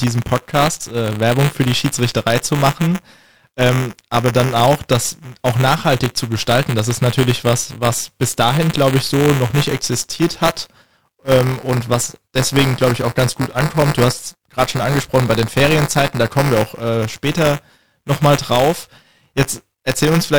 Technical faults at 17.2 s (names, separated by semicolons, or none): buffer tearing